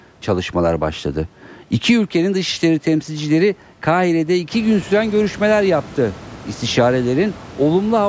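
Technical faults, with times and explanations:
Nothing stood out on listening to this speech clip as a technical fault.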